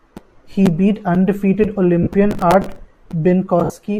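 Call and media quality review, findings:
Lost LE Audio frames at 2.03 s, just after "beat undefeated", and again at 3.64 s: short grainy smears, about 40 ms then 60 ms, the decoder papering over four and six missing 10 ms frames.

Processor overload crackle from 2.31 to 2.79 s: gritty tearing where a run of roughly twenty tiny buffers, a few ms each, missed deadline and replayed old audio.

A light breathy edge throughout is likely the 64 kbps LC3 link itself.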